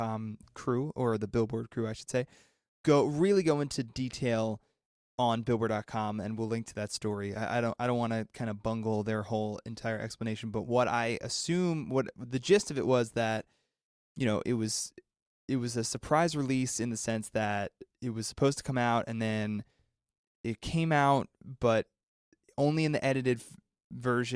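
No technical faults can be heard anywhere in the speech. Nothing in the signal stands out as needing comment.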